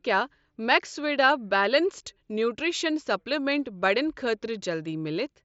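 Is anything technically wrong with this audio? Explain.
No technical faults detected.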